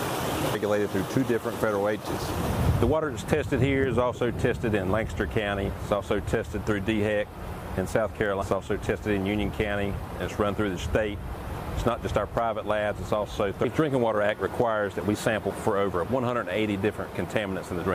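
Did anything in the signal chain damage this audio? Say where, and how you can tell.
Yes. Damaged data in a compressed stream, at the codec stage: corrupted bytes made the decoder misread frames and lose sync until it found the next frame header. Each break sounds as a short chirp or blip at 0.54, 2.05, 13.63 and 15.49 s, and a longer one from 8.38 to 8.43 s.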